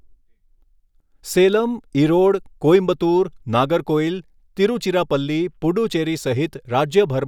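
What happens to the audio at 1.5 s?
A few samples were likely dropped from the stream at 1.53 s, just before "ઈરોડ કોઈમ્બતુર". The waveform jumps straight to a later value across a gap of a fraction of a millisecond, which is too brief to lose any sound but produces a single sharp click.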